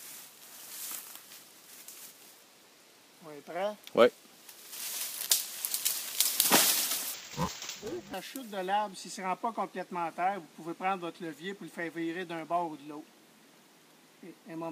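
From 7.14 to 8.14 s, dull, robotic buzzing at 345 Hz: interleaved audio read as planar, 2.9 ms blocks (fits 128 samples). Spectrogram shows regular 345 Hz striping.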